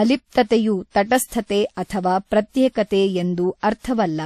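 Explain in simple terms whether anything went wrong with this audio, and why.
Transcoding between lossy codecs runs through the whole clip: the speech carries two layers of compression smearing at once, and nothing survives above about 13.9 kHz. That likely comes from saving it in one compressed format, such as WMA, and then again as MP3, which piled its own damage on the first.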